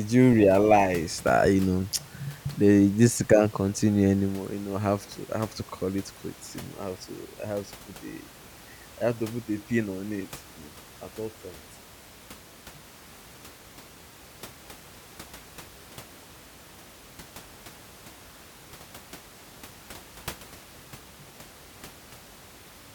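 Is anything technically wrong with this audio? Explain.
No, nothing technical is wrong with this speech recording; the only thing beneath the speech is the room's own background noise, sitting about 23 dB down, which belongs to the recording rather than to any fault in the system.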